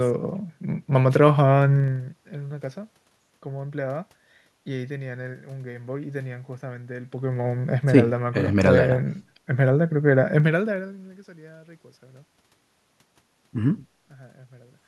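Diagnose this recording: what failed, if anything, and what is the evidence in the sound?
Zipper noise at the gain stage: ticking rides the level moves at 1.76–2.12 s, 7.0–7.48 s and 10.36–11.16 s, as 1 dB unsmoothed steps about 30 per second, unlike clean fader-style fades.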